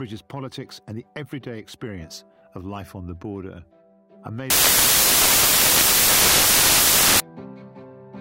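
A stretch of the audio from about 4.50 s to 7.20 s turns into loud, harsh broadband noise, and that's the classic sound of samples built from the wrong bytes. The reader is stitching each sample together incorrectly, whether shifted by a byte, with the byte order flipped, or with the alignment misjudged, so the jittery low-order bits end up as the big part of every value. The result is loud noise over that whole span.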